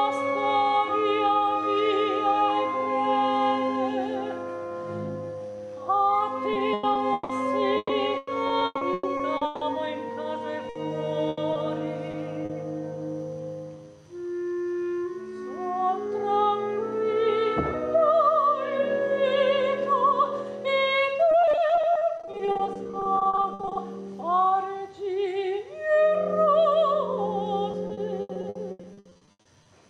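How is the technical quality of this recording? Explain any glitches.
The quality is impaired by four stretches of repeated packet loss (robotic sound). They run from 6.53 to 9.63 s, 10.69 to 12.51 s, 21.31 to 23.77 s and 27.71 to 29.67 s. Audio keeps dropping out, and each hole is papered over by extending the last sound. Up to about a third of each stretch is patched this way, with holes up to 160 ms long. The result is choppy, with pieces missing.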